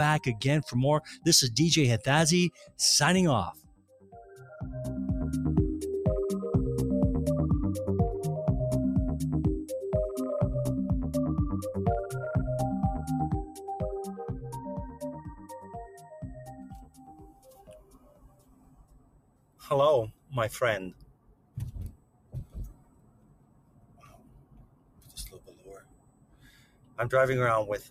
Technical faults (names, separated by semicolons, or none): noise suppressor applied to music or sounds; sound cut by the noise suppressor